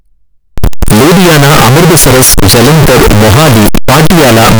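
From 0.58 s to the end, the speech turns into a near-square, harsh roar at an almost fixed, high level, with noise as loud as speech. This is likely float read as integer, not clipping, and pitch survives.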